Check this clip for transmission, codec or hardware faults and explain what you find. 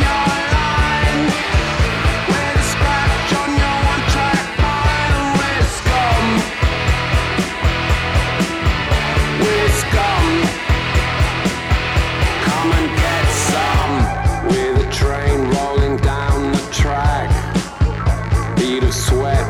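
No transmission, codec or hardware faults.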